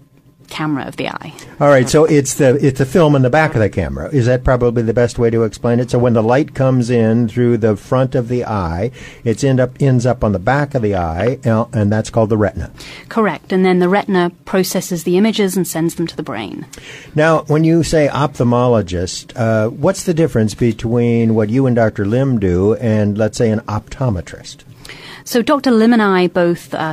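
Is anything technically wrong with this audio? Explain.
No, there are no technical faults.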